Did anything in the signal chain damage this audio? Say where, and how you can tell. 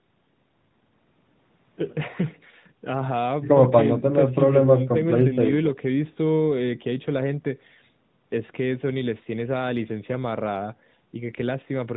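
No, nothing damaged it.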